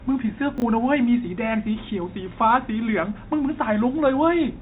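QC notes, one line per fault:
0.58 to 0.62 s, chunks out of order: a 20 ms slice of the speech turns up one slot late and plays after the slice that should follow it. Nothing goes missing, but the order is swapped across those 40 ms, leaving three hard joins where the waveform doesn't line up. You hear a quick jumbled stutter, sitting in the G.711 telephone-band sound that tops out around 3.8 kHz.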